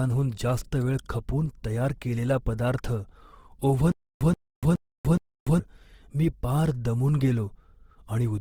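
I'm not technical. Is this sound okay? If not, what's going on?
No, it has two problems. Throughout the whole recording the speech sounds rough and grainy, and its sounds turn noisy and gritty. That is the mark of Opus compression, most likely the music-style mode of this codec squeezed hard. Unlike MP3-style damage, there's less watery swirling, and the sound isn't muffled either, because the full range of treble is still there. The graininess is plainly audible.

From 3.92 to 5.59 s, just before "मी पार दमून", there is a stutter with silent gaps. A short snippet of about 0.13 s plays four times. Each time it is followed by about 0.29 s of dead silence, so it repeats steadily every 0.42 s. Unlike an ordinary dropout, the same fragment keeps coming back. The likely cause is a player or stream stalling and retrying, and the speech that belonged in that stretch is lost.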